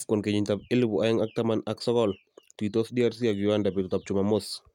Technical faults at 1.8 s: none

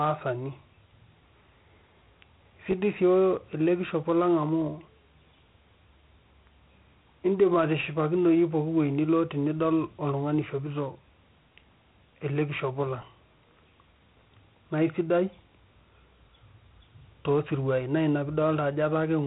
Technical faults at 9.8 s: Dialogic VOX ADPCM

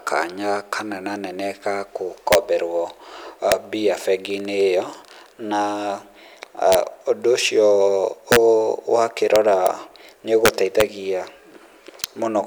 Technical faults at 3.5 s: integer overflow

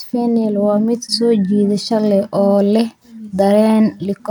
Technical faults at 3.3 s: none

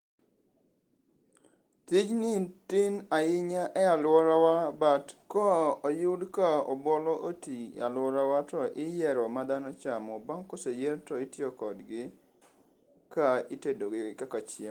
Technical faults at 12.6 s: none

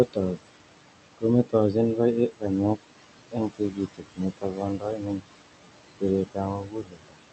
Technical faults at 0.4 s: noise suppressor artifacts; speech cut by the noise suppressor

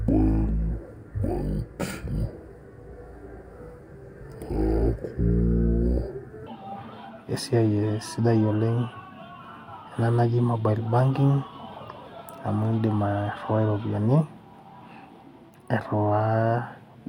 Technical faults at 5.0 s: stereo read as mono

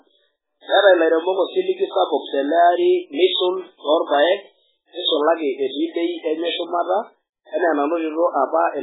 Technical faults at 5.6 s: MP3 compression

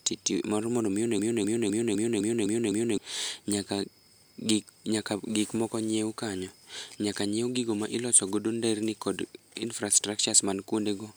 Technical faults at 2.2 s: broken-record loop

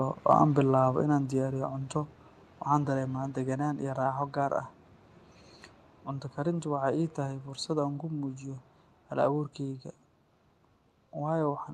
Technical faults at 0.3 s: microphone overload

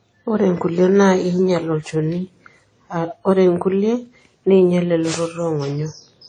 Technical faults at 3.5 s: low-bitrate audio saved at a high bitrate

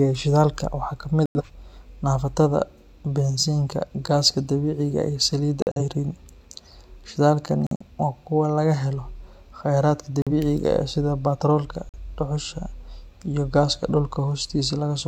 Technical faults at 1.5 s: corrupt frame muted

